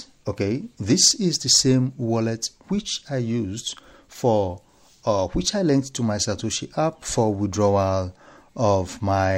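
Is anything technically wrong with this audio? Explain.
Yes. Throughout the clip, sample clock jitter is present: the converter's clock wanders by around two microseconds, so each sample lands slightly off time. Steep, loud or bright passages suffer most, producing a hiss-like roughness roughly 30 dB below the sound that disappears in quiet moments.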